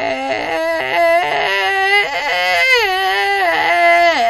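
From start to finish, the music carries plainly audible damage from lossy transform coding, likely WMA compression. Nothing is present above 17.4 kHz. Quantisation noise smears around each sound, so attacks ring and sustained parts turn washy. A hiss rises and falls with the music. Quieter details seem thinned out, as if weak components were dropped. The degree of damage points to a low bitrate, around 48 kbps.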